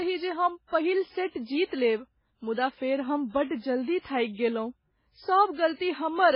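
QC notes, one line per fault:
Throughout, MP3 compression: the speech stops dead at 5.3 kHz and swims with a heavy watery, swirly texture. That's likely a bit-starved MP3 encoder cutting the treble and zeroing weak detail frame to frame, which fits a rate around 16 kbps.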